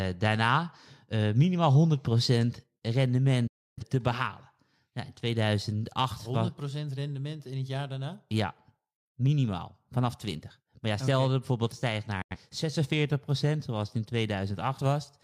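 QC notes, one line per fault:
2.78 s to the end: sudden gain jump. The level drops by about 4 dB in a single step and stays down for the rest of the clip. The background noise falls by the same amount at the same instant, which rules out a compressor or a soft fade: there is no ramp and no recovery. The likely cause is a digital gain change applied from one sample to the next without smoothing.
3.47 to 3.84 s and 12.22 to 12.37 s: digital broadcast dropout. The audio fades to silence within about 8 ms, stays muted, and then returns. The first hole lasts about 0.3 s, which fits roughly seven lost frames. The second lasts about 85 ms, which fits two. The audio during each hole is simply missing, not smeared or garbled, which separates this from codec artefacts. It points to the receiver muting on bad frames.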